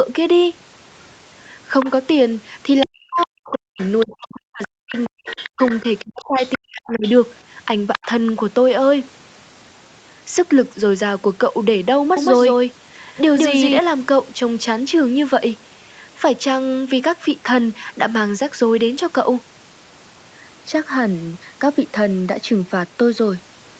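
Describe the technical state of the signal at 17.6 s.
At 17.6 s the speech is intact, with no dropout, glitch or distortion, only the band limit near 8 kHz and the usual coding noise of the call path.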